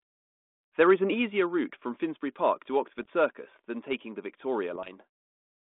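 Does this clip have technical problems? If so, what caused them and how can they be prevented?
Yes. At 1.14 s, just before "route from", the level of the speech and the background drops together by about 4 dB in a single step and stays there. That pattern points to a microphone volume stepped down, most likely by the call software's automatic input gain control judging the microphone too hot and cutting the device's input volume at once rather than easing it. Because the change happens at the input, everything after it is simply quieter. Disabling automatic microphone gain adjustment and setting a sensible fixed input level beforehand would prevent this step.

From 2.98 to 3.10 s and again from 4.73 to 4.95 s there are pops and short, rough bursts with brief jumps in level. These are bit errors on an ADPCM link. The link is a G.726 path at 32 kbit/s, and its 200 Hz to 3.5 kHz band can be heard. 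A small fraction of a percent of bits arrived flipped. Because ADPCM sends differences from an adaptive prediction, a wrong bit also throws off the decoder's step size and predictor, so each error rings on for a few milliseconds before it settles. Better radio conditions or error protection on the cordless or line link would prevent these bursts.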